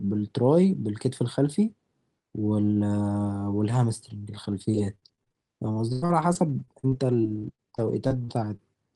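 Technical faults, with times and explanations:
4.43–8.61 s, repeated packet loss (robotic sound): around twenty dropouts up to 96 ms, each patched by extending the previous sound, so speech turns choppy and robotic.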